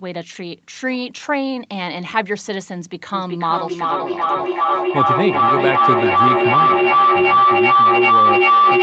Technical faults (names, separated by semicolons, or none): feedback howl